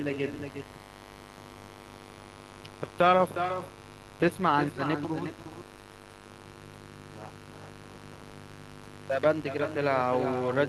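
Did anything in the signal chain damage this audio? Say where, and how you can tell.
Yes. There are two faults, and both run through the whole clip. The first is mains buzz, and it enters in the analogue wiring. A steady, raspy buzz sits under the speech from start to finish. It is built on 50 Hz, with sharp harmonics that climb into the kilohertz range. That edge points to switching spikes from a dimmer, a rectifier or an unshielded cable, twice per mains cycle. Its level is not far below the speech, somewhere near 15 dB down.

The second fault is echo with no canceller, which comes from call processing at the far end. Every phrase returns as a fainter, thinner copy. It arrives about 0.4 s after the original and is about 8 dB below the speech. The far side is playing the call through a loudspeaker, and its microphone is picking it up. Nothing subtracts that copy before it travels back across the network to this end.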